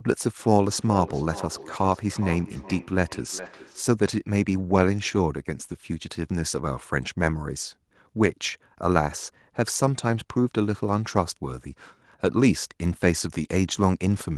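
Speech runs through a feedback echo between two devices from 0.67 to 3.95 s. Two devices in the same room share the call, so one device's microphone picks up the other's loudspeaker, and neither echo canceller removes sound it did not play itself. The speech comes back at a steady interval of roughly 0.4 s, each return thinner and more ringing, peaking at about 14 dB below the direct speech. Inside that stretch, between 3.37 and 3.47 s, is a lost packet rebuilt from error correction. Packets went missing, but the packets that followed carried low-bitrate copies, and the decoder played those instead. There is no silent gap, but about 60 ms of the speech turns rougher and noisier, which points to three separate packets being replaced this way.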